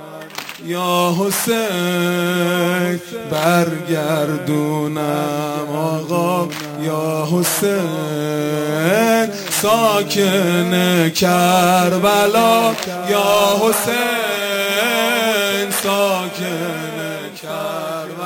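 Imaging from sample-and-hold upsampling runs through the whole clip: the rate was raised by holding each sample with no smoothing filter, which points to a jump from about 22 kHz to 44.1 kHz. Mirrored spectrum fills 11.03 to 22.05 kHz at about 17 dB below the sound, heard as a bright metallic fizz.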